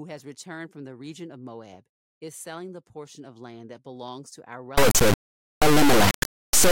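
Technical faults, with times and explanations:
4.78–6.71 s, integer read as float: the speech turns into a harsh, clipped square-wave buzz, which fits 32-bit integer samples decoded as 32-bit float, swinging between zero and the clipping limit.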